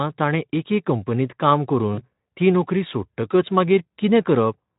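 VoIP packet loss concealed by the speech codec occurs from 1.93 to 2.03 s, just before "ती नोकरी". About 40 ms of audio, which fits two lost 20 ms frames, was rebuilt by extrapolating the previous pitch and spectral shape at falling gain. It sounds like a brief buzzy or noisy smear, and the speech stays weak or distorted as it resumes.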